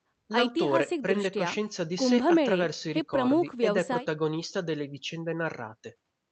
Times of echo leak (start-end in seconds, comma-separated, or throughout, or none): none